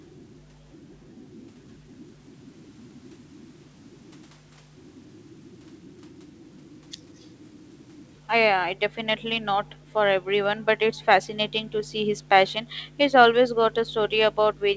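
From 7.17 to 7.27 s, a faint copy of the speech returns 206 ms late. It is a brief scrap, very far below the talker. This is likely an echo leak. A far-end loudspeaker reached its microphone, and the echo canceller missed this piece.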